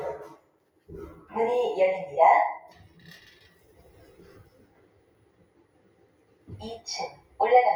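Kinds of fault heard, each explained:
Noise suppressor applied to music or sounds: a speech-tuned suppressor left running mistakes steady sound for noise, so the level keeps swinging by around 20 dB.
Sound cut by the noise suppressor: held or fading sound gets pushed down by about 6 to 8 dB, longest from 4.45 to 6.48 s.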